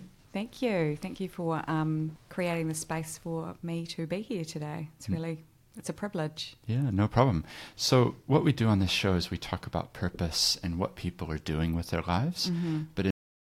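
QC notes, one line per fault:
13.11 s, cut-off end: the final buffers were never written or played out, so the speech halts mid-sound and falls straight to digital silence with no natural decay.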